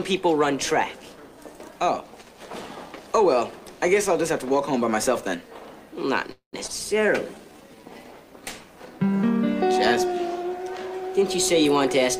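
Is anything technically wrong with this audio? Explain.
Yes, three faults sit close together in the middle of the clip.

From 6.31 to 6.55 s there is a call audio freeze. The last sound is stretched into a fading buzz for about a tenth of a second and ends in roughly 120 ms of silence, most likely because packets were held up and the jitter buffer ran dry. Nothing is lost, since playback resumes where it stopped. On a spectrogram the last frame appears smeared horizontally and then fades out to a blank column.

At 6.67 s a skip ahead follows. About a tenth of a second of audio is missing, and the two sides are butted together with almost no gap. This happens when queued audio is discarded to catch up. The waveform shows an abrupt splice, and the spectrogram shows a vertical seam where the harmonics jump.

From 7.06 to 7.90 s a jitter buffer slow-down stretches the sound to about 89% speed, adding 102 ms. 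Single pitch periods are repeated to rebuild the buffer's reserve, so sounds drag at unchanged pitch. On the spectrogram, features look horizontally elongated while harmonic spacing stays fixed, and the waveform shows repeated identical cycles.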